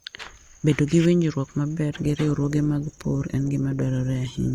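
A speech clip with an adaptive stream at a lower bitrate. At 1.95 s the quality drops abruptly, with no gap, and stays degraded to the end at 4.54 s. Codec artefacts grow. The player switched to a leaner stream, which fits Opus falling from 64 to 16 kbit/s.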